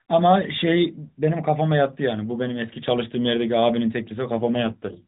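From 4.34 s to 5.06 s the speech turns buzzier and more synthetic. This is an AMR rate drop. The mobile codec switched to a lower mode, leaving fewer bits for the voice. The sound fits a fall from 12.2 to 5.9 kbps. The narrow band stays unchanged, with no gap.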